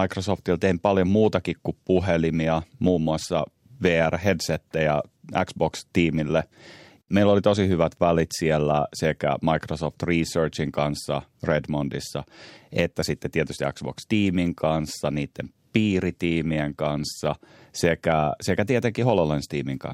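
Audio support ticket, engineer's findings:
Listened through the speech recording and nothing stood out that needs action on this ticket.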